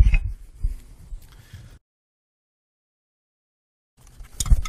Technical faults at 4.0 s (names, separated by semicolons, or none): time-stretched section